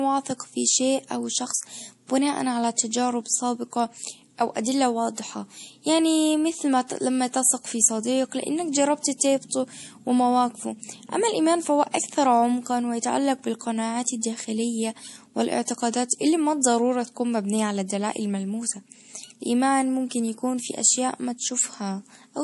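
MP3 compression damage runs through the whole of this speech recording, from start to finish, and it is plainly audible. Nothing survives above about 11.5 kHz, so the treble stops at a hard ceiling. That fixed cut-off and the watery, swirling texture point to a likely low-bitrate MP3 encode, fitting something near 48 kbps. Short of bits, the encoder dropped the top band and zeroed weak frequency lines, which flicker in and out between frames.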